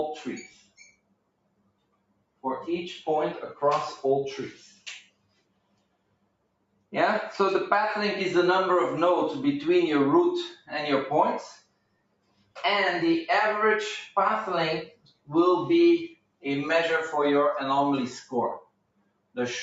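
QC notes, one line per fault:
Throughout: noise suppressor applied to music or sounds. A suppressor designed for speech stays active across the whole clip and treats sustained tones, room ambience and reverb as noise to remove. Its gain therefore swings by roughly 20 dB, passing onsets while pulling held material down, so the sound pumps and thins. Unlike a plain gate, it works on steady content even while the signal is loud, rather than only closing in silences. The band stops at 8 kHz, which comes from the call codec path and is not part of this fault.
0.48–2.44 s, 4.53–6.93 s, 10.55–10.71 s, 11.54–12.57 s, 14.87–15.30 s, 16.09–16.45 s, 18.60–19.37 s: sound cut by the noise suppressor. In each of these stretches the suppressor judged the sound to be noise and turned it down about 21 dB at its deepest, with the 10.55 s event reaching about 16 dB and the 16.09 s and 18.60 s events about 22 dB. 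The sustained and decaying parts sink or have their tails cut short while attacks mostly survive. The longest spans run about two seconds each, and the shortest lasts roughly 150 ms. A dropout would silence everything at once, whereas these cuts act selectively.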